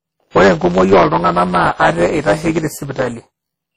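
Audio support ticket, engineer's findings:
Hard clipping, throughout. Gain stage overdriven by about 7 dB, so a small share of samples exceed the stage's range and peaks are cut flat. The flat tops add high harmonics, heard as distortion on the loudest speech peaks.

Block size mismatch (truncated), throughout. Writer's blocks longer than the reader's, which fits 512-sample blocks written, and each block's tail is discarded. Result: a 100 Hz buzz at the block rate, and speech running 1.07 times fast.

WMA compression, throughout. Heavy codec damage, likely a low-bitrate WMA encode, which fits roughly 32 kbps. Nothing above 14.3 kHz. Long transform blocks smear quantisation noise over tens of milliseconds, giving ringing, washy speech with hiss that breathes with the signal.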